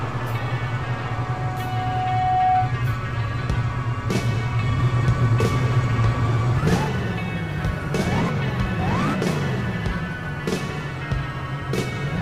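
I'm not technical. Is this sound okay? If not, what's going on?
No. From about 0.84 to 2.84 seconds there's a loudspeaker feedback squeal. A microphone is picking up the speaker it's feeding, so the sound goes round and round the loop and one pitch, around 741 Hz, keeps reinforcing itself. You hear a single whistle-like tone swell up over roughly a second and a half until it's louder than everything else, and then it stops.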